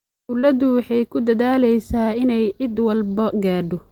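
At 0.39 to 0.52 s, short concealed packet loss: 40 ms of speech arrived late and 33 ms was synthesised from preceding sound, leaving a brief smear rather than a silent dropout.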